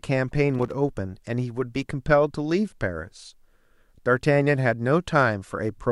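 A worn or dirty contact in the signal path was making and breaking, producing loose connector crackle from 0.55 to 0.72 s. Each interruption chops the speech and snaps any DC offset on the line into pops, heard as a short, irregular burst of scratchy crackle.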